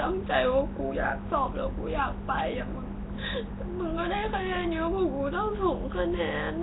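Throughout the speech, a rough, hissy halo and smeared, underwater character point to Nellymoser compression, likely at a rate that fits a 16 kbps stream. Weak bands are filled with noise, and nothing remains above 3.8 kHz. A spectrogram shows a hard ceiling and grainy, blocky fill.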